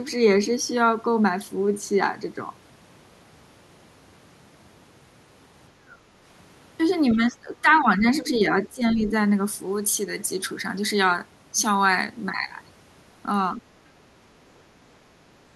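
An echo canceller likely mistook the talker for loudspeaker echo during double talk and turned the line down, so the speech is suppressed in double talk: it dips from 7.11 to 8.04 s, 8.24 to 8.42 s and 8.69 to 9.11 s, sinking by roughly 10, 5 and 15 dB. From 9.48 s to the end, pre-emphasis was left on: a J.17 treble boost was applied with no matching cut on playback. The top end sits about 11 dB high at 10 kHz relative to 1 kHz, making the sound thin, bright and hissy on sibilants.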